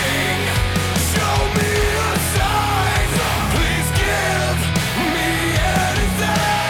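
At 1.81 to 1.84 s, a worn or dirty contact briefly makes and breaks as it shifts, a loose connector crackle. The signal is chopped on and off in quick, uneven steps, producing a short, ragged burst of scratchy crackle lasting about 30 ms.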